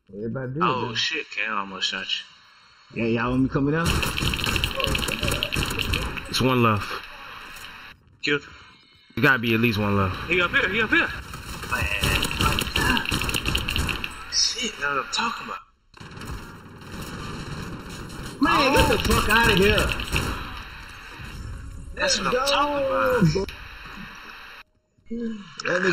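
Channel delay causes comb filtering throughout the sound. One channel runs under a millisecond late, so mono summing carves evenly spaced notches from around 700 Hz, leaving it hollow.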